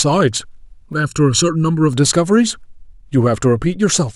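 From 0.93 to 1.93 s, one channel runs late by about 0.7 ms before the two are summed to mono, a channel delay causing comb filtering. The shared speech cancels at evenly spaced frequencies starting near 700 Hz, leaving the sound hollow and phasey.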